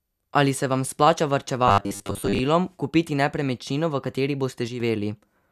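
A speech clip with two distinct faults. From 1.68 to 2.41 s, between "se vam splača" and "kupiti nepremičnino v kateri", the voice turns into robotic sound from repeated short buffers: a rigid, metallic buzz at 100 Hz that loosely tracks the words. The likely cause is audio arriving too late, with playback looping a 10 ms slice to fill the gap and dropping most of the real material in that stretch. On a spectrogram this shows as evenly spaced horizontal harmonic lines at multiples of 100 Hz replacing the natural formant movement, and the waveform shows a short pattern repeating almost identically. After "kupiti nepremičnino v kateri", between 4.68 and 4.8 s, there is a sudden gain jump. Speech and background noise both drop by about 6 dB in a single step, most likely from a digital gain change applied without a ramp. On the waveform the envelope steps down abruptly at one sample, and a spectrogram shows the whole frequency range, noise floor included, darkening at once along a sharp vertical edge.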